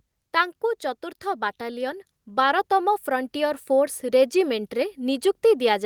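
An automatic gain control judged the input too quiet and raised its gain gradually from 1.23 s to 4.06 s, by about 6 dB. In this speech clip, the voice and the background swell together over those nearly three seconds.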